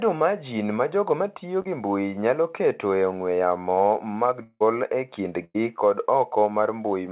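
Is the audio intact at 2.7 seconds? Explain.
Yes, the audio at 2.7 seconds is intact, with no dropout, glitch or other fault there; the speech carries the narrow band of a G.711 call path, with nothing above 4 kHz.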